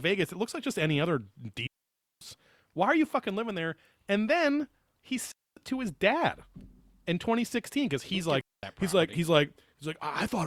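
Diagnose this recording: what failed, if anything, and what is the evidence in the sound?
Digital wireless dropout on the radio link: clean holes at 1.67–2.21 s, 5.32–5.57 s and 8.41–8.63 s, no noise bursts, receiver muting on lost data.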